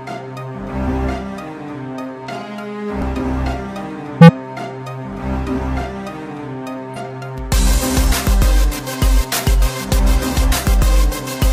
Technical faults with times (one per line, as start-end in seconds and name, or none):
0.84-0.89 compressed frames skipped
4.18-4.30 compressed frames skipped
6.88-6.98 compressed frames skipped